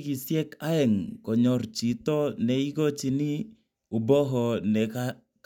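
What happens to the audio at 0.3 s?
Nothing goes wrong at 0.3 s; the speech there is intact, with no dropout, click or distortion.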